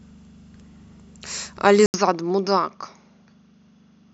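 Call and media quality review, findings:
Input switched to a poorer device, 1.86 s to end. About 80 ms of silence at the switch. Speech then turns duller, with no content above 6.6 kHz. Level drops roughly 5 dB. A faint new noise floor appears. Likely cause: capture rerouted to a narrower-band microphone or headset call profile.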